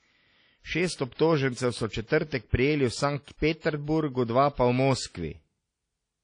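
Throughout, the speech sounds washy and ringing, with hiss that swells with it and nothing above 10.1 kHz: likely WMA compression at a bitrate around 32 kbps.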